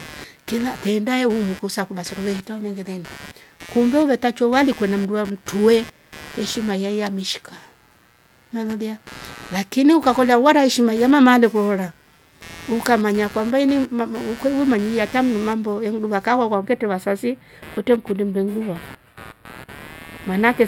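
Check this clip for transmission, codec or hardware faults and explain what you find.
Two faults are present in this speech clip: a continuous interference buzz and a late-clip comb-filtering problem.

Computer activity noise runs through the whole recording. Load changes in the computer disturb the audio circuit's shared ground, producing a buzzing chirp pulsing at around 150 per second, roughly 20 dB below the speech, following machine activity rather than the talking.

Channel delay (comb filtering) starts at 16.54 s, right after "arte mimambo enuduka ka", and lasts to the end. One channel lags the other by only a few samples, about 0.07 ms, and the mono sum cancels at evenly spaced frequencies beginning around 7 kHz. The top end sounds hollow and phasey.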